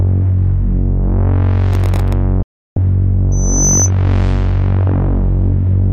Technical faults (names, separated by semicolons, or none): processor overload crackle; digital broadcast dropout; loudspeaker feedback squeal